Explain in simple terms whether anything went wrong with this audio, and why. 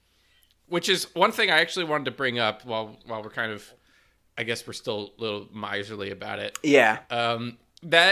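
Nothing went wrong with this speech recording that a listener can pick out. There is no moment where the sound falters or changes in a way that points to a problem.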